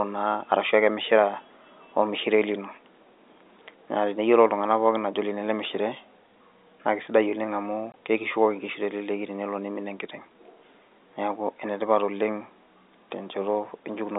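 At 7.92 s a single packet of the speech stream failed to arrive, and the receiver played silence for its 20 ms slot instead of concealing it. The result is a brief hole in the speech with hard start and end edges. The surrounding telephone-band sound, limited to roughly 250 Hz to 3.7 kHz as G.711 coding allows, resumes on the far side of the gap.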